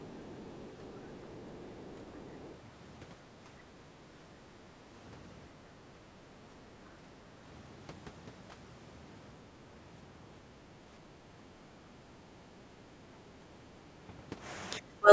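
Right at the start there's a faint second voice underneath the talker, most likely the other side's voice leaking through from the loudspeaker because the echo canceller didn't scrub it all out of the mic. It shows up in scraps from 0.02 to 0.67 s, 0.84 to 1.13 s, 1.39 to 1.95 s, 2.16 to 2.21 s and 2.43 to 2.5 s. It sits way down, tens of dB under the main talker.

Around 6.97 to 7.08 s the room tone briefly ducks by about 11 dB, for roughly a tenth of a second. That's background gated by the echo canceller: it decided the loudspeaker was active and clamped the mic, so the ambience drops out for a moment and then comes straight back once it lets go.

The very end, from 14.99 s to the close at about 15.1 s, has the talker's own voice pulled down hard, a very deep cut lasting a fraction of a second. That sounds like speech suppressed in double talk, likely both sides talking at once so the canceller couldn't tell the near voice from the echo and squashed everything. 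It's all heard through the usual call-mic band with nothing above 8 kHz.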